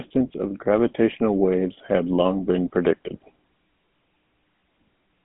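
From start to end the speech carries GSM full-rate codec damage, plainly audible: a buzzy, gravelly roughness from pulse-driven vocal-tract modelling, consistent with the 13 kbps rate. Beyond the telephone band of 150 Hz–3.5 kHz, where nothing above 3.8 kHz survives, the texture itself is coarsened.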